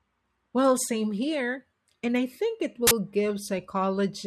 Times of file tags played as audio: 2.87-2.91

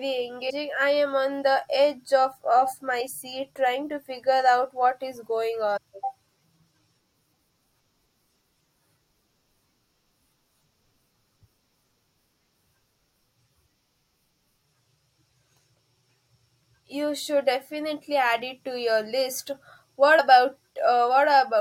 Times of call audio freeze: none

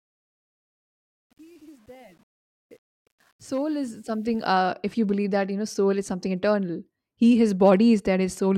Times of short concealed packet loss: none

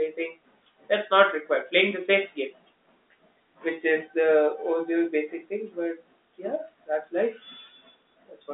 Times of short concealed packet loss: none

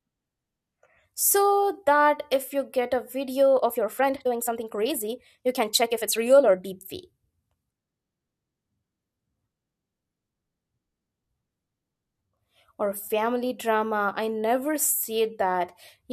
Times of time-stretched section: 3.55-6.73

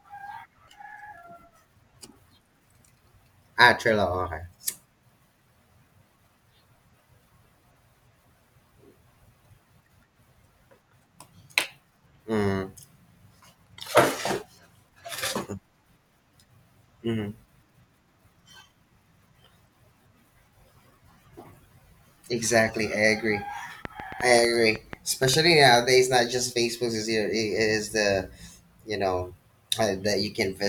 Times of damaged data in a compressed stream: none

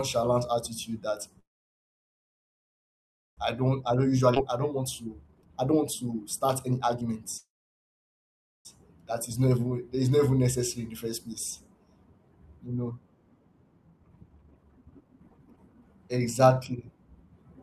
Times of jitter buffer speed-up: 3.61-4.28, 4.71-7.25, 13.87-16.83

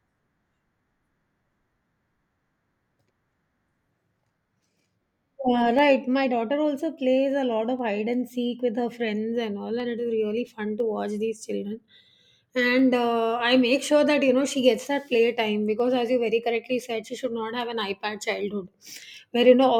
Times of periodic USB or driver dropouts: 0.80-18.82

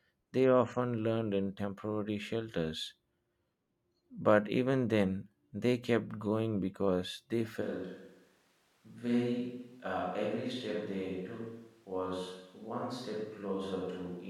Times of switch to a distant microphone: 7.63-14.30

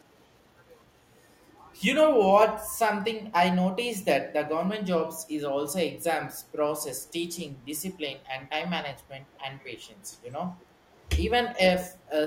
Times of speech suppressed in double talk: 10.30-10.35

